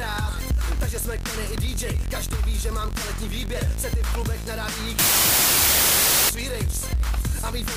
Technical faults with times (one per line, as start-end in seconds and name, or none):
4.99-6.29 wrong sample width